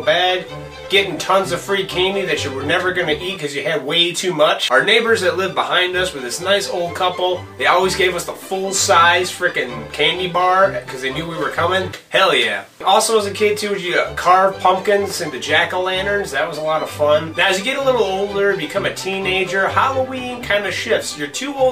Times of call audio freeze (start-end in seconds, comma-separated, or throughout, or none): none